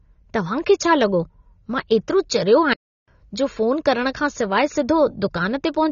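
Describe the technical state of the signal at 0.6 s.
At 0.6 s the speech sounds dull and smeared, with nothing above 7.1 kHz. This runs throughout and is likely AAC compression at a low bitrate, around 24 kbps.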